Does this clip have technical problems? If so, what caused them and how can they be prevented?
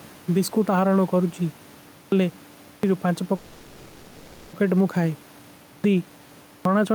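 Yes. Gain pumping runs through the whole speech clip: the level swings by around 5 dB, with loud and soft parts squashed closer in level. The likely cause is microphone gain set far too high, so a fast limiter keeps clamping down. Lowering the input gain until the limiter rarely engages would prevent it.

A clipped start after a pause occurs at 1.92, 2.62, 5.65 and 6.46 s, each following a silence of 0.3 to 0.5 s. About 0.2 s of onset is swallowed each time as the output device wakes from sleep. Disabling the device's power saving, or keeping its stream open through silence, would prevent it.

A call audio freeze runs from 3.35 to 4.55 s: the last sound is stretched into a fading fill for 1.18 s, then the speech resumes where it stopped, losing nothing but arriving later. Delayed packets likely drained the jitter buffer. A more stable network path or a deeper adaptive jitter buffer would prevent it.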